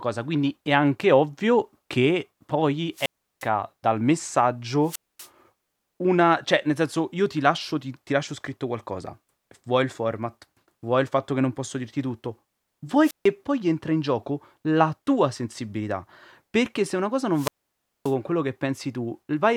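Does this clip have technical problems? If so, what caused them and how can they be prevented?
Yes, the speech has four wireless microphone squelch dropouts: 2.93 to 3.48 s, 4.83 to 5.29 s, 13.02 to 13.28 s, and 17.33 to 18.15 s. Each time the FM signal weakens, hiss swells, then the receiver's squelch shuts the output off, leaving near-silent gaps of 0.35, 0.24, 0.15 and 0.58 s before the sound comes back. To prevent it, keep the transmitter in clear line of sight, use diversity receivers and pick a clean frequency.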